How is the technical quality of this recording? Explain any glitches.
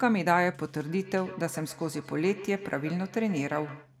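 There's a clear problem. From 0.81 s to 3.95 s there's feedback echo between two devices: a second device replays the speech into the microphone, so each word comes back roughly every 150 ms, thin and ringing, peaking about 17 dB below the speech.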